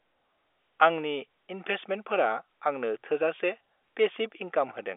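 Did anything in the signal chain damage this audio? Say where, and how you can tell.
No, nothing in the chain damaged it; the speech simply sits inside a telephone band of roughly 300 Hz to 3.5 kHz with nothing above 3.7 kHz, which is what ordinary G.711 telephone coding leaves behind.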